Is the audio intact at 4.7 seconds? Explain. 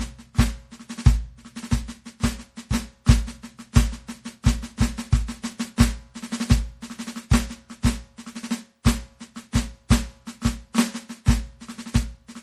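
No. At 4.7 seconds, as throughout, the music was likely re-encoded as MP3 about four times. This generation loss leaves a swirly, hollow, smeared sound with blurred attacks, empty above 14.3 kHz.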